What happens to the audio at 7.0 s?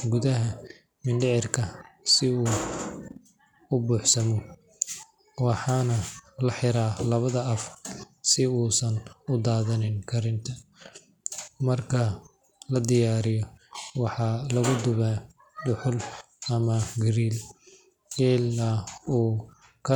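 Nothing goes wrong at 7.0 s: the speech there plays through intact, with no dropout, click, distortion or other fault.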